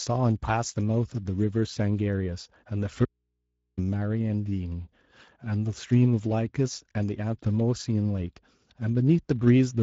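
A speech recording carries Speex codec damage from start to finish. The voice has the grainy, hoarse texture of a CELP coder short on excitation bits, and it sits at a middle wideband setting rather than the near-vocoder robotic sound of the lowest modes. Nothing reaches above 7.7 kHz, and the top band sounds like shaped noise rather than real detail, which sets it apart from plain low-pass filtering. From 3.05 to 3.77 s the speech vanishes abruptly for about 0.72 s, leaving only mains hum roughly 55 dB below the speech. That hum gap marks it as an audio dropout to a faint residue rather than a pause or fade, and the likely cause is a lost upstream signal while the input path stayed live.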